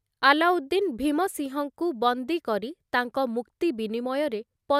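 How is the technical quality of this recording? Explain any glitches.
No glitches can be heard anywhere in the recording. The speech carries no technical fault that needs explaining.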